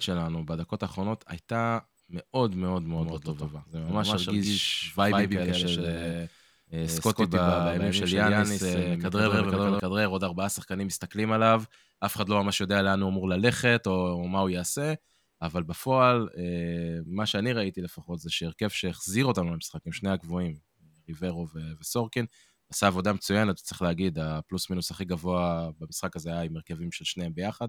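From 2.98 to 9.80 s, a doubled audio track: an equally loud, dry copy trails by roughly 150 ms, likely from a slower capture path, drawing offset twin waveform envelopes.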